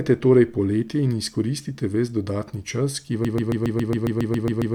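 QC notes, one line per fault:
3.25–4.74 s, broken-record loop: Right after "čas ki", the playback or encoding chain likely stalled and kept re-sending the last fragment it held in its buffer. A 137 ms slice of speech then repeats exactly, back to back, 11 times, and the stutter runs to the end of the clip. Because the same short piece cycles at a fixed rate, it sounds like a rapid, regular stutter, and whatever speech should have followed is lost.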